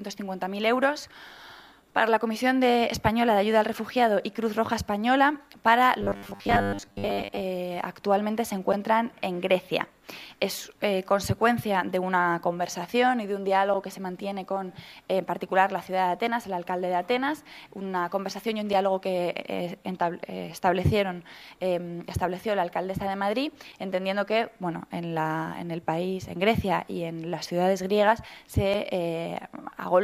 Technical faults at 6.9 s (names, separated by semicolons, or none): robotic sound from repeated short buffers